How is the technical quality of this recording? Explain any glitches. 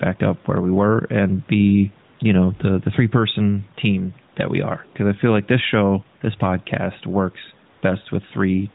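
The recording has two audible problems: level pumping that runs through the whole clip, and two brief patches where the real background is replaced by synthetic noise. The faint room noise and the narrowband phone-line character of the speech are heard alongside them.

Gain pumping is present from start to finish. The gain is pulled down by roughly 5 dB under each louder stretch of speech. The likely cause is input gain set too high, with a fast limiter or compressor clamping down on every peak, which flattens the dynamics.

AMR comfort noise appears at 2.18 s and again from 7.74 to 7.82 s. The phone briefly treated the line as silent and stopped sending speech frames, and the receiving end filled the space with smooth generated noise. The room background is swapped out for a steadier hiss that switches in and out.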